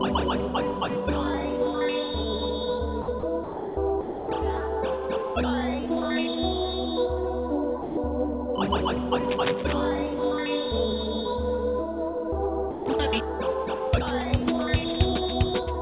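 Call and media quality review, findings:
Sound dropped by the voice detector, six gaps: 3.02–3.08 s, 3.20–3.23 s, 3.44–3.77 s, 4.01–4.28 s, 7.82–7.97 s, 12.71–12.86 s (30 to 330 ms). Audio replaced by steady comfort noise. Likely sender VAD misclassifying quiet passages as background. Distinct from packet loss: no concealment smearing or repeated fragments, just flat noise, then a clean restart when the detector retriggers.

Cable scratch noise, 9.24–9.73 s. Dense, irregular rustling at about 10 dB below the signal, riding over the audio. Likely a worn cable, connector or control being moved, causing rapid contact-resistance changes. Distinct from codec artefacts or dropouts: nothing is removed, and the noise is added in uneven bursts rather than tied to frame timing. Band-limited like everything else here, since the call path stops at 4 kHz, which fits a G.711 narrowband codec.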